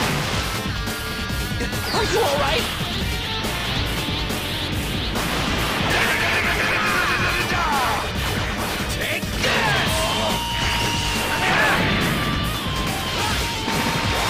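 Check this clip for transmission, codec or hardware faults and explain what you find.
Nothing here points to a transmission, codec or hardware problem; the audio carries on steadily the whole way, with nothing to flag.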